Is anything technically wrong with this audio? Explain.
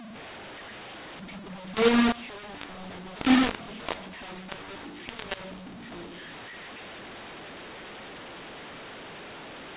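Yes, there's a mu-law and A-law mix-up running through the whole clip. The speech was encoded with A-law but decoded as if it were mu-law. The two G.711 curves map the 8-bit codes to levels differently, so every sample lands at the wrong amplitude. Some come out too loud, others too soft, and the quietest ones jump well above silence. You hear it as harsh, gritty distortion on the speech, with the pauses filled by a noise floor. The telephone band itself is intact, with nothing above 4 kHz, consistent with 8 kHz sampling.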